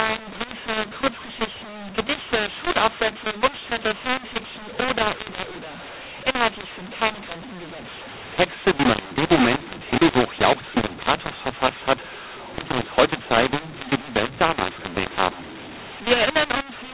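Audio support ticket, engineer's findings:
mu-law and A-law mixed up, whole clip. Speech harsh and grainy; pauses filled with noise instead of silence. Probable component: G.711 decoder, A-law stream read as mu-law. Mismatched companding curves rescale every level and lift the quietest samples off zero. Unlike clipping, distortion is present at all levels, not only peaks. The 4 kHz telephone band itself sounds intact.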